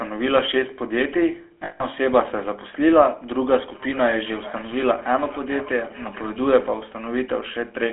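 All the way through, the speech has that buzzy, gravelly GSM full-rate codec sound. The regular-pulse excitation roughens every voiced stretch, and the band is squeezed to roughly 300 Hz to 3.4 kHz. The damage is plainly audible and fits the old 13 kbps full-rate coder.

From 1.64 to 1.83 s there are lost GSM frames. The decoder keeps replaying the last good frame, so you hear a metallic, ringing hold for about 160 ms instead of real speech. That length fits a run of eight 20 ms frames.

From 3.64 to 6.86 s there's feedback echo between two devices. One device plays the far end out loud, and the other's microphone sends it straight back. Neither echo canceller catches it, so each word returns roughly every 0.4 s. The repeats get thinner and more ringing each time, peaking at about 21 dB below the speech.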